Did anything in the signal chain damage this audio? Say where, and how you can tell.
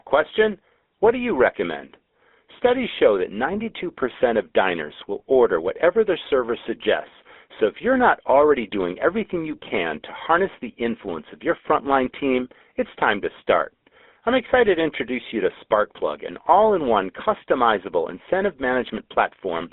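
Yes: a GSM full-rate codec stage, consistent with 13 kbps coding, runs throughout, with pulse-driven excitation causing a buzzy, gravelly roughness and band-limiting from 250 Hz to 3.6 kHz.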